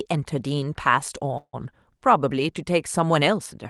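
Speech clip, sent through a call codec whose coding band stops near 12 kHz, with a call audio freeze from 1.37 to 1.55 s. The sound stalls there: the last moment of speech is stretched into a fading buzz for about 160 ms, including roughly 60 ms of near-silence, before speech resumes where it left off. Nothing appears to be lost, but everything after the stall arrives about 160 ms later, which points to a likely jitter-buffer underrun caused by delayed packets.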